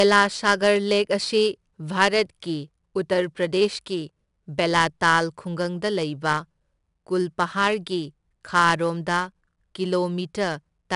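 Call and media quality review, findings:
4-bit ADPCM compression, throughout: plainly audible gritty hiss tracking speech level, roughness on attacks, nothing above 10.6 kHz; consistent with roughly 89 kbps, 22 kHz-rate encoding.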